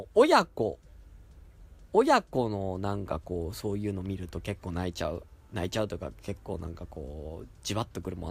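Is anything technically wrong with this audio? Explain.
Yes, there's one glitch. At about 1.45 s there's a repeated buffer: fresh audio didn't arrive in time, so the device replayed its last tiny chunk twice more, around 5 ms in all. The repeats fit a 128-sample buffer and come across as a quick click or brief buzz in the speech, not a clear stutter.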